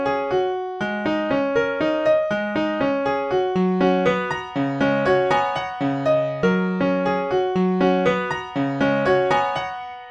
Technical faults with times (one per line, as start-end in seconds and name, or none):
none